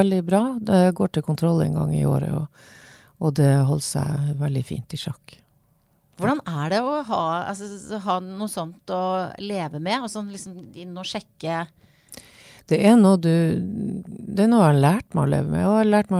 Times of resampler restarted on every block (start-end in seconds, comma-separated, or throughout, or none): none